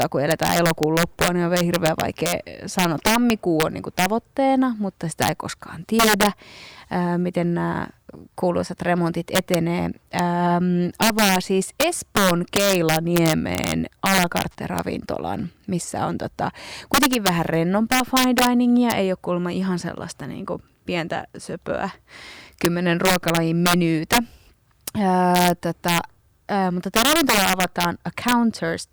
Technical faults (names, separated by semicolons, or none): integer overflow